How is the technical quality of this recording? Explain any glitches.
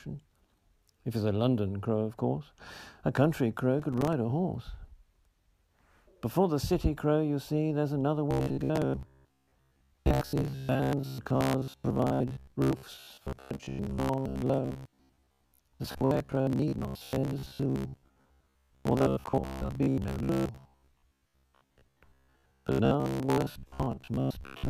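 The technical quality is poor, with two distinct glitches.

From 3.80 to 4.13 s there is processor overload crackle. The processor misses a run of buffer deadlines, and each miss drops in a short silent gap. The tiny gaps point to buffers of a few milliseconds. Together they sound like a brief gritty tearing.

From 8.31 s to the end, the audio has robotic sound from repeated short buffers. It turns into a rigid metallic buzz at 66.8 Hz. The likely cause is the last 15 ms being replayed while fresh audio arrives too rarely, so most of the sound is repetition.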